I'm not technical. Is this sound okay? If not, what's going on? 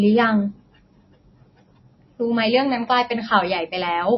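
No. MP3 compression damage runs through the whole clip: the speech sounds muffled, with nothing above about 5.8 kHz, and plainly watery. It's likely from saving at a very low quality setting, so the file discarded the high treble and flickering faint detail.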